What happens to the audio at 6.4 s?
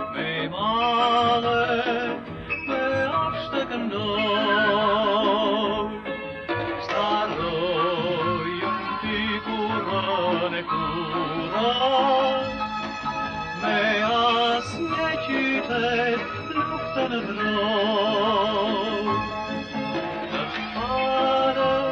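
Nothing goes wrong at 6.4 s; the audio plays through that moment intact, with no dropout, click or distortion.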